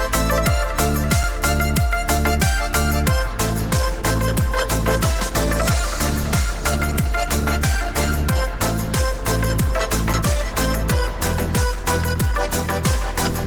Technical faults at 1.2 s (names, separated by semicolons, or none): block of digital silence